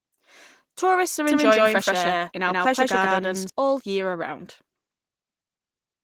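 Opus voice compression affects the whole speech clip. At a rate that points to roughly 16 kbps, the coder runs in hybrid mode: linear prediction handles the lower band and a transform layer fills in above 8 kHz, so the top end is present. The excitation is coded coarsely, so the voice sounds hoarse and slightly robotic. A plain low-pass or an MP3-style codec would instead dull or swirl the highs without this buzzy grain.

From 1.27 s to 3.49 s, starting just before "all year around", a doubled audio track appears. A second full-band copy trails the original by around 150 ms at about equal loudness. It is likely caused by the same audio being captured twice through a slower path. Unlike an echo or reverb, the copy has no decay and no room colour, and it cuts in and out abruptly.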